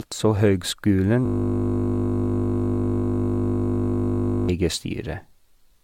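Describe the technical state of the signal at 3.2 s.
At 3.2 s the signal sits inside a system hang loop running from 1.26 s to 4.49 s. The playback side froze while the hardware kept cycling the same 20 ms slice of its ring buffer, so one tiny fragment repeats exactly, over and over. At that length the repetition fuses into a steady 50 Hz buzz instead of a stutter. Unlike a dropout, there is no gap in the sound. The identical fragment simply recurs with perfect regularity.

Under that buzz, and across the whole clip, there is generation loss, likely from the audio being put through AAC-LC at 96 kbit/s about five times. Each re-encode requantises on a shifted frame grid, so the errors stack. The result is a hollow, swirly smear, blurred onsets and nothing above 17 kHz. A single low-bitrate pass would sound duller but less phasey. The accumulated holes and swirl are what mark repeated passes.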